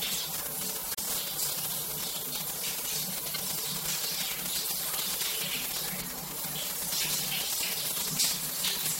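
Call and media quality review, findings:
Corrupt frame decoded, 0.92–1.02 s: flipped bits in a few compressed frames, which the decoder played anyway instead of concealing them. Misread gains and codes put energy at the wrong frequencies, giving a brief chirp or noise burst peaking near -15 dBFS.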